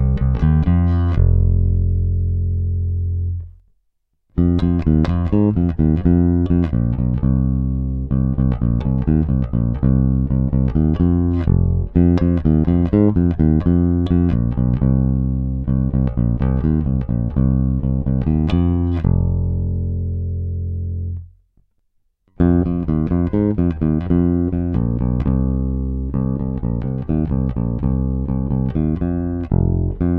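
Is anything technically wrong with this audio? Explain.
No, nothing here stands out as a technical problem; it all sounds just as it should.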